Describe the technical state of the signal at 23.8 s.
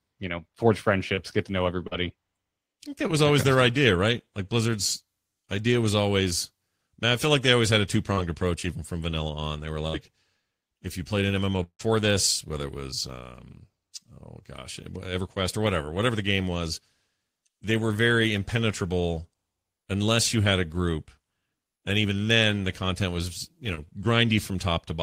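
At 23.75 to 23.79 s there is a short concealed packet loss: about 20 ms of speech never arrived, and the decoder extended the preceding sound to fill it. It is heard as a brief smear or wobble. A spectrogram shows the preceding sound briefly smoothed and repeated across the gap.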